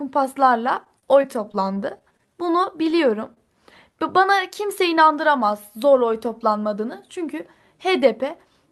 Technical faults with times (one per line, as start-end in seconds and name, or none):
0.75-2.35 repeated packet loss (robotic sound)
3.34-3.38 short concealed packet loss